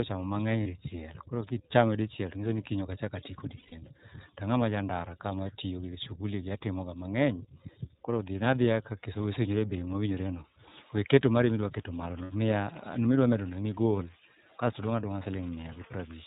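Speech, and the whole thing has gone through the iLBC codec. Nothing above 4 kHz survives, and the voice has that plainly rough, slightly synthetic edge, which fits iLBC's 13.33 kbps mode with 30 ms frames. There are also lost iLBC frames: a brief 30 ms patch at 0.63 s, a longer 150 ms hold at 3.57 s, and 60 ms at 12.24 s, right after "weketo mari midwaketo malono". Each gap comes out as a held, slightly buzzy vowel where the decoder repeats the last pitch cycle mixed with noise, and the voice snaps back almost straight away because each frame decodes on its own.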